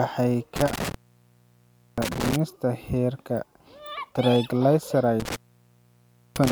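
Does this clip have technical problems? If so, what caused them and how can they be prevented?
Yes. The speech cuts out twice, from 0.56 to 2.36 s and from 5.2 s to the end, each time with crackle at the edges and faint hiss during gaps of about 1 s. This is intermittent contact: a loose plug or cable briefly opening the line. Firmly seating connectors and replacing worn cables prevents it.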